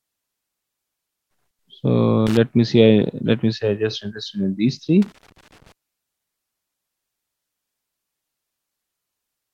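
At 2.27 s, a short burst of loose connector crackle lasts about 0.1 s. It returns from 5.02 to 5.72 s, longer. A worn contact is making and breaking, chopping the signal into irregular scratching.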